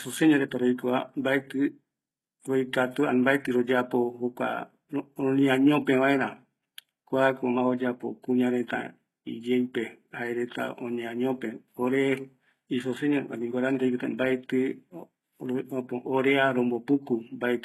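From start to finish the speech carries heavy codec damage, most likely HE-AAC compression at a very low bitrate, consistent with roughly 16 kbps. The upper band is rebuilt from copied lower bands rather than coded, so s sounds come out gritty, lispy and metallic. A spectrogram shows a hard ceiling at 12.3 kHz with nothing above, and blurred, smeared energy in the treble whose harmonics fail to line up with those below.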